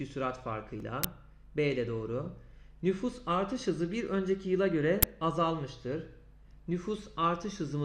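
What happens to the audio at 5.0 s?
At about 5.03 s an uninitialised buffer reaches the output. For roughly 10 ms, one block's worth, the playback path reads a buffer that nothing had written audio into yet, so whatever values were left sitting in that memory are played as samples. The result is a short, loud crack that bears no relation to the surrounding sound, which then resumes once the next properly filled block arrives.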